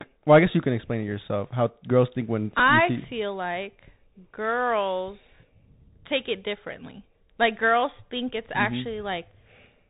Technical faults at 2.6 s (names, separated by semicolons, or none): Bluetooth CVSD headset codec; Bluetooth headset packet repeated